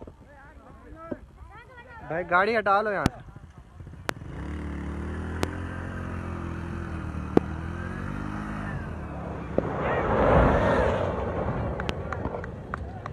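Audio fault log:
3.06–3.08 s, 4.09–4.12 s, 5.43–5.46 s, 7.37–7.39 s, 9.58–9.61 s, 11.89–11.92 s: loud pop. Six single, sharp pops, each roughly 20 ms, jump far above the sound, which continues underneath. Each is likely a brief voltage pulse from a plug, switch, static or driver glitch entering the chain.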